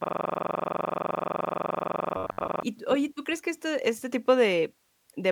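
From the very start until 2.63 s, just before "tú oye", the audio is caught in a system hang loop that was already under way when the clip begins. The driver or machine stalled while the output hardware kept replaying its ring buffer, so one 42.67 ms slice repeats about 60 times, which fits a 2048-sample buffer. At 23.4 repeats per second it comes across as a hard, mechanical stutter rather than a smooth tone.

Between 2.17 s and 2.48 s, overlapping the tail of that loop, the voice takes on a rigid, metallic buzz pitched at 93.8 Hz. It still follows the speech loosely, but about half of the material is repeated rather than new. This is the robotic sound from repeated short buffers, likely caused by audio arriving too seldom. The software fills the gaps by looping roughly 10.7 ms fragments, and that fixed repeat length imposes its own pitch on the sound.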